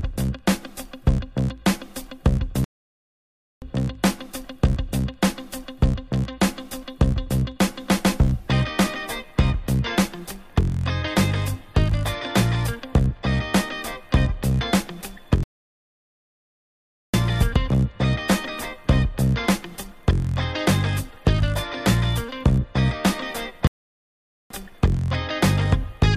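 Three playback stalls cut the sound mid-flow: 2.64–3.62 s (0.98 s), 15.43–17.14 s (1.7 s) and 23.67–24.50 s (0.83 s). Each is a flat silent gap in the waveform and a blank vertical band on the spectrogram, likely from the player starving for data.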